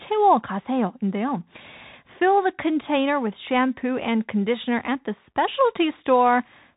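From start to finish, the speech carries the Bluetooth CVSD headset codec: nothing above 3.8 kHz survives, and its one-bit delta coding, with a step that lags loud high sounds, makes s sounds scratchy over granular hiss. A plain telephone band-limit lacks that grain.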